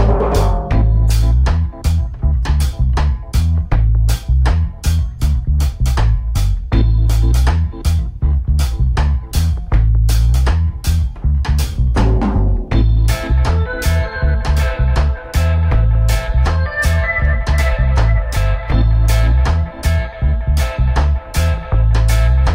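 Hard clipping runs through the whole clip. Something in the chain was driven about 4 dB past what it could pass, so the loudest peaks, well under one percent of the signal, were cut flat. The flattened tops add high harmonics, heard as crackle on peaks.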